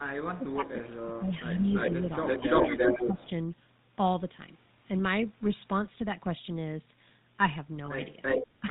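The whole clip carries the GSM full-rate codec. Everything above 4 kHz is gone, and the speech sounds buzzy and gravelly. The damage is plainly audible.

From 0.38 to 1.67 s the speech is suppressed in double talk. It dips by up to about 20 dB over roughly a second. An echo canceller likely turned this talker down while both sides spoke.

Echo leak starts at 0.88 to 0.92 s. A faint copy of the voice returns 402 ms late, far below the speech. Its likely cause is an imperfect echo canceller at a loudspeaker end.

Echo leak returns from 1.62 to 1.95 s with a 341 ms delay, at about the level of the speech.

From 2.25 to 3.3 s the 341 ms echo is slightly louder than the speech. Inside that span, from 2.39 to 3.27 s, double-talk suppression cuts the speech by up to about 15 dB.

Lost GSM frames follow at 7.86 to 7.89 s. The sound briefly holds as a rough, metallic ring, which fits a single missing 20 ms frame.

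Echo leak recurs from 8.22 to 8.47 s, with the same 341 ms delay, at about speech level.

At 8.60 to 8.64 s the speech is briefly suppressed in double talk, a dip of about 10 dB.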